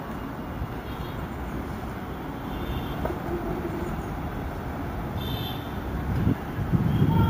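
All the way through, there's imaging from sample-and-hold upsampling: 16 kHz audio taken to 48 kHz by repeating samples, leaving a metallic fizz between 8 and 16 kHz, about 26 dB down.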